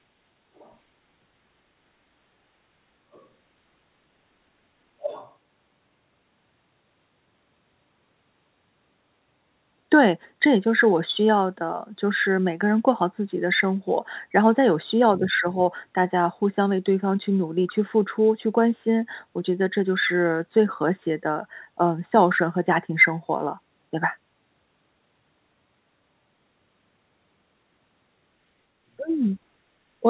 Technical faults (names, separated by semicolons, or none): other side's voice leaking through